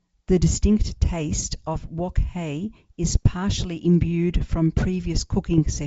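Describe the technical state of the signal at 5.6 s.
Short pops and a rough, crackly burst with brief jumps in level run from 5.54 to 5.68 s. These are bit errors on an ADPCM link at a low rate of around 0.2 percent. Each flipped bit throws off the decoder's step size and prediction, so the damage rings on briefly instead of staying a single click.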